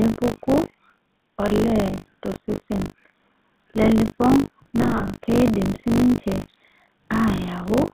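It's a speech recording that has gone through the GSM full-rate codec, and you can plainly hear it. The band runs only from about 150 Hz to 3.7 kHz, so everything sounds boxed in. On top of that there's the codec's buzzy, gravelly texture, which comes from rebuilding the voice through a vocal-tract model driven by a sparse pulse train instead of the real waveform. All of that fits the 13 kbps full-rate mode.

Running the whole way through is a steady 50 Hz robotic rattle, the signature of buffer tearing. The writing side and the playback side of the ring buffer have drifted, so they cross once every period. A rate of 50 Hz points to a period of about 20 ms. In each period, a small slice (something like a sixth) is stale audio from a few tens of milliseconds earlier, butted against the current audio with hard edges on both sides. That's why the rattle rides on the signal and disappears in the gaps.

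From about 4.82 to 5.15 s, just before "keidim sii ninche", there's a stretch of lost GSM frames. Roughly 180 ms of audio went missing in bits scattered across about 320 ms, with the longest single gap around 70 ms, which fits a handful of 20 ms frames. The decoder covered each hole by repeating the settings of the last good frame, so those moments come out as a rough, metallic, held ring instead of clean dropouts.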